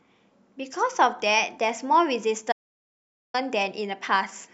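The input feed was likely lost for a moment, through a dropped connection, a failed link or an accidental mute, while the recorder kept writing silence. In this speech recording that produces an audio dropout to silence from 2.52 s to 3.34 s. The speech cuts off abruptly and resumes just as suddenly, and the gap of roughly 0.82 s is total silence with no room tone beneath it. Whatever was said during that stretch is missing.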